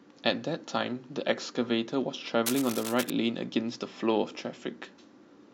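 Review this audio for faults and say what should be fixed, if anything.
A worn cable, connector or control was likely moved during recording, so its contact resistance changed rapidly. From 2.46 to 3.10 s this adds cable scratch noise: dense, uneven scratching and rustling only a little below the level of the speech. Replacing or reseating the worn lead and connectors, and keeping cables still while recording, would prevent it.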